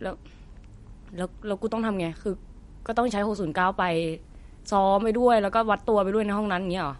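Throughout the speech, MP3 compression is likely, at a low bitrate near 48 kbps: nothing above 11.2 kHz, a flat-topped spectrogram ceiling, and watery, swirly flickering detail. From 2.93 s to the end, video or display buzz enters faintly: a 59.94 Hz buzz with hash above, plus a 15.7 kHz line tone drawn as thin horizontal spectrogram stripes.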